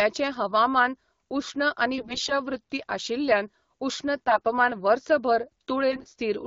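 Speech over an AMR wideband link, with three short bursts of AMR bit errors: 1.93 to 2.33 s just after "हवामान उश्ण", 4.27 to 4.41 s after "वृत्तीय आशिल्ल्यान उश्ण", and 5.9 to 6.14 s. A fairly heavy error rate on a weak link flips the less protected bits. That misplaces the excitation pulses and skews the fine pitch, gain and spectral values, so level and pitch hold but the sound turns scratchy and gargly.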